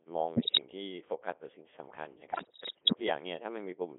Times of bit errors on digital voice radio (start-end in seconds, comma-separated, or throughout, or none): 0.36-0.62, 2.32-3.01